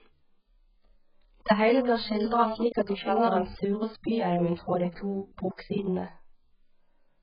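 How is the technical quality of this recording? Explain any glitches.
The recording is heavily degraded by a single fault that runs through the whole speech clip.

AAC compression, throughout: the audio most likely passed through an AAC-LC encoder starved of bits, which fits a rate around 8 kbps. With so few bits per frame, the encoder discards everything above 5.1 kHz and coarsely quantises what remains, so whole bands drop out or are filled with substitute noise. The speech sounds dull and muffled, sibilants turn fizzy, and sustained vowels warble and smear from frame to frame.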